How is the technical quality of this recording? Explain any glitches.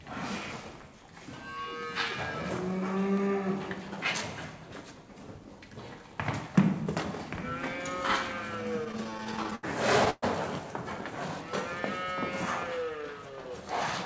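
Two delivery glitches occur late in the clip, heard over call-codec audio with nothing above 8 kHz, which fits G.722 at 64 kbps.

Repeated stalls (stutter), 8.84 to 9.65 s: late packets kept emptying the jitter buffer, so twelve short gaps, the longest 78 ms, were filled by extending the sound. The result drags and stutters, with nothing lost.

Call audio freeze, 10.10 to 10.24 s: the sound holds and fades for about 120 ms, ending in 20 ms of silence, then resumes where it stopped. The likely cause is packets held up in transit.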